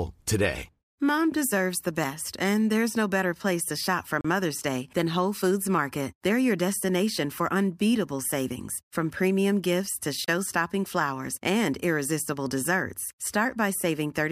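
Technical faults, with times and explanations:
4.21–4.25 s and 10.25–10.28 s, gap at a join of encoded pieces: the speech drops out for about 36 ms, then 34 ms, six seconds apart. The pieces were encoded separately and joined untrimmed, so each start's encoder delay and end padding leave a short hole with smeared edges.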